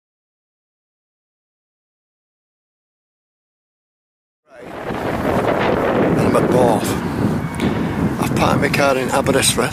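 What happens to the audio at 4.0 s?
At 4.0 s the audio is intact, with no fault of any kind at that moment.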